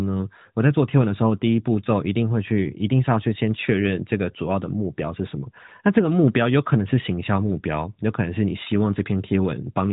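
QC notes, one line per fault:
No faults are heard in this speech clip. It carries the band-limited sound of the AMR narrowband mobile codec, with nothing above 3.8 kHz and only light coding texture, which fits its top 12.2 kbps mode.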